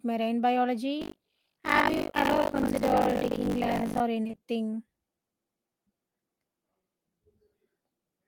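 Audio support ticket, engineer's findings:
Buffer tearing, 1.00–4.01 s: steady 50 Hz robotic buzz on the speech. Writer and hardware read pointers have slipped, so each 20 ms period splices in a chunk of audio from one lap earlier.

Repeated packet loss (robotic sound), 4.23–4.39 s: choppy burst with bits missing. Network jitter buffer concealing several short dropouts, longest 20 ms, with roughly half the stretch filled by stretched-out previous sound.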